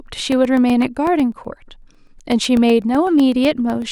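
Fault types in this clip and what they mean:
periodic USB or driver dropouts: from 0.07 s on, a blocked driver silences about a millisecond of speech every 0.125 s, giving steady regular ticks.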